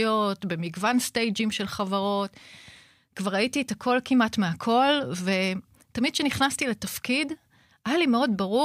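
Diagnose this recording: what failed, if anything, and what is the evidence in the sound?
Nothing in the recording stood out as a failure on listening; the speech comes across without any audible defect at any stage of the chain.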